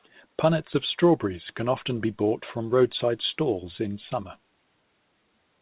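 Listening to this speech recording over its telephone-band coding, nothing stood out as a technical problem.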